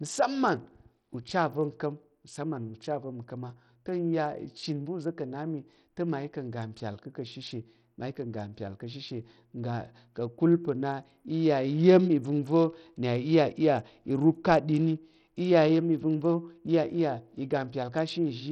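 Throughout the speech, the treble flickers and drops out, with a gritty, grainy noise riding on the sound and nothing above 16.6 kHz. The cause is likely Bluetooth SBC compression under heavy strain. Its starved upper sub-bands and coarse quantisation fit a bitrate near 64 kbps.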